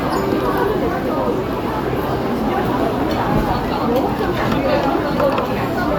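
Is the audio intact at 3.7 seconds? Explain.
Yes, the audio is intact at 3.7 seconds, with no fault audible at that moment.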